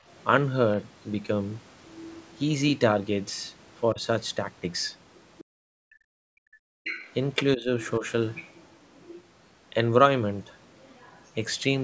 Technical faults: other side's voice leaking through; speech suppressed in double talk

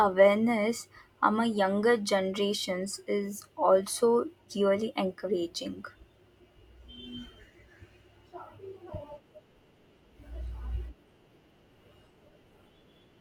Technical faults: compressed frames skipped

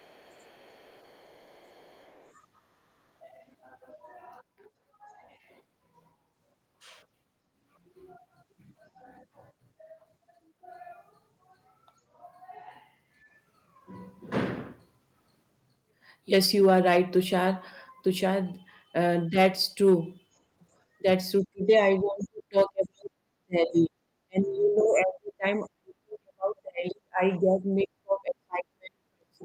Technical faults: other side's voice leaking through; speech suppressed in double talk

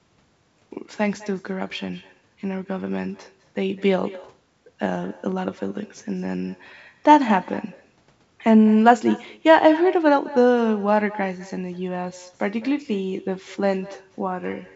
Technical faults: echo with no canceller

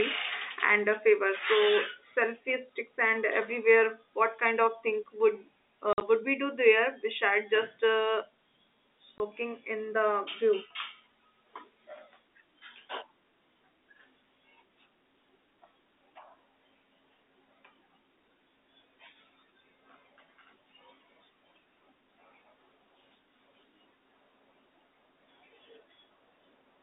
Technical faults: packet loss filled with silence

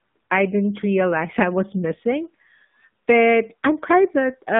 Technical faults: AMR narrowband mobile codec

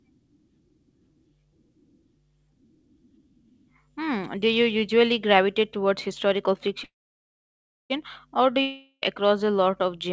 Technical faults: call audio freeze; long network dropout

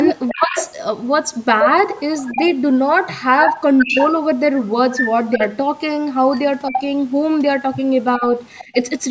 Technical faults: echo leak; speech suppressed in double talk

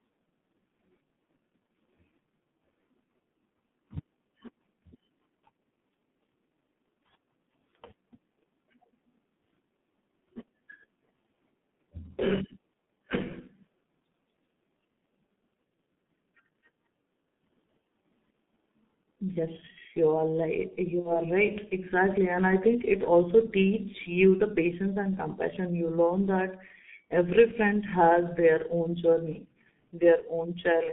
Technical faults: G.723.1 codec; VoIP packet loss concealed by the speech codec

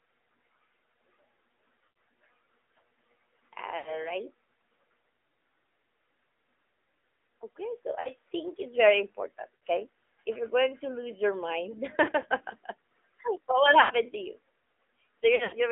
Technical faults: AMR narrowband mobile codec; lost AMR speech frames

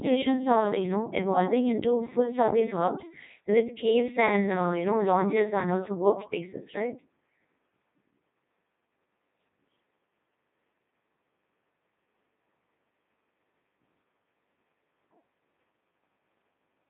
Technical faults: Codec 2 vocoder

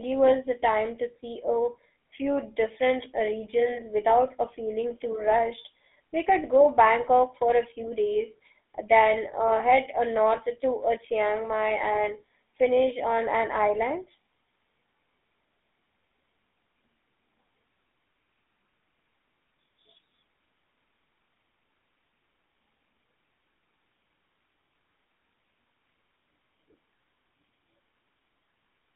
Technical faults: GSM full-rate codec

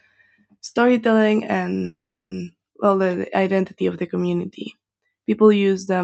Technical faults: call audio freeze

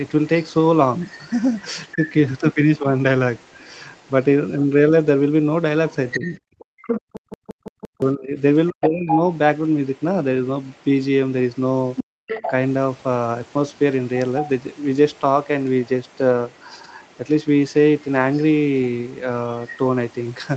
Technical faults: other side's voice leaking through; speech suppressed in double talk; system hang loop; background gated by the echo canceller

